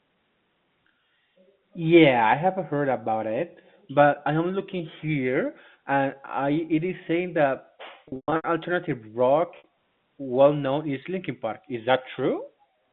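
From 8.08 to 8.44 s the sound turns briefly buzzy and held, flickering in and out, and at 9.58 s a single short stutter of about 60 ms does the same. Both are packet loss with pitch repetition: packets went missing, and the receiver filled each gap by repeating the last pitch period and fading it away. The first burst loses 260 ms in all, with a longest gap of 120 ms, which fits 20 ms packets dropping in clusters.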